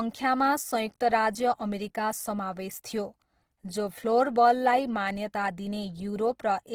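Throughout, the speech sounds grainy and rough, likely from Opus compression at a rate around 16 kbps; a spectrogram shows noisy, smeared bands reaching 20.2 kHz.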